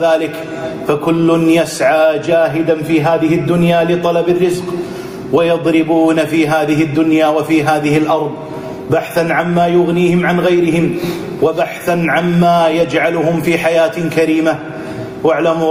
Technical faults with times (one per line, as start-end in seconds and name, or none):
0.00-15.71 gain pumping